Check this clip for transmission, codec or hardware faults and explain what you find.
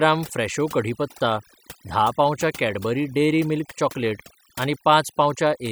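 There's one fault, and it runs through the whole speech clip: overdone noise removal. A noise reducer set too aggressively pulls individual frequency bands right down whenever they sit near its noise estimate, taking quieter parts of the voice with them. So the background drops and breaks up into little twinkling specks.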